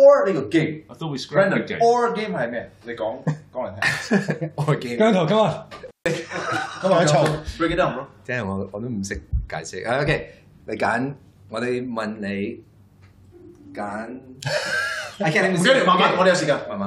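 Intermittent contact occurs from 5.86 to 6.06 s. A loose plug or cable connection briefly loses contact, so the signal path opens and the audio drops out for about 149 ms. The break is marked by crackle at each edge, as the contact scrapes apart and then reconnects. While the line is open, the sound is gone and faint hiss remains, until the connection closes again and the audio returns.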